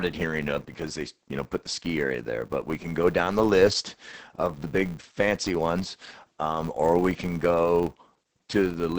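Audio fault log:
throughout, Opus voice compression: the SILK coder at about 10 kbps limits the band to 8 kHz and codes the excitation coarsely, leaving speech heavily muffled, hoarse and slightly robotic.
throughout, filter restarted on every block: the filter drops its state and starts each block from silence, so a small transient opens every block, heard as a 200 Hz buzz that rises and falls with the speech level.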